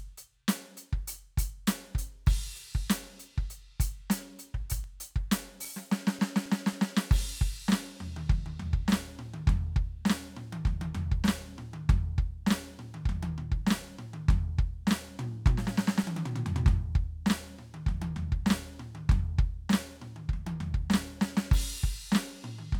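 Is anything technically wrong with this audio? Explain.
Yes. From 4.84 to 7.27 s the music has CD scratch ticks, ten of them at about four a second, each lasting only a few milliseconds. A blemish on the disc overwhelms error correction once per revolution, and the player mutes or interpolates the damaged samples. The result is a rhythmic clicking. On a spectrogram each tick is a thin broadband vertical line, and on the waveform it is a tiny flattened gap or spike.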